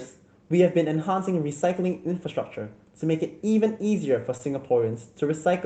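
At 4.37 to 4.41 s there is a short concealed packet loss. About 20 ms of speech never reached the decoder in time, and the receiver covered the gap by extending the preceding sound for about 18 ms before blending back into the real audio. It is heard as a brief smear or wobble. On a spectrogram the preceding sound runs on across that slice, beneath the call path's ceiling near 8 kHz. The waveform shows a soft seam where the fill blends back into the real audio.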